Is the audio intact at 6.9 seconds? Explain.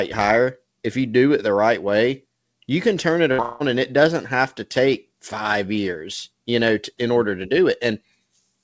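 Yes, the audio is intact at 6.9 seconds, with nothing there beyond the ordinary sound of a call path that points to a G.722 codec, with its content stopping at about 8 kHz.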